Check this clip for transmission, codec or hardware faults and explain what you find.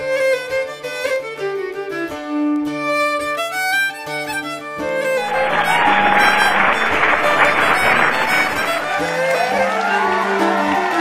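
There is one fault: word clock ticks running through nearly the whole clip, from 0.23 s to 10.94 s. About five times a second, there is a short, sharp tick, and some ticks are louder than others. The receiving device is running on its own clock rather than following the sender's. The two clocks differ by roughly 100 parts per million, so they slip by one sample roughly every fifth of a second. At each slip, a single sample is dropped or repeated. On a waveform this shows as a one-sample discontinuity at each tick, and on a spectrogram as about fifty thin vertical lines spread evenly across the full frequency range.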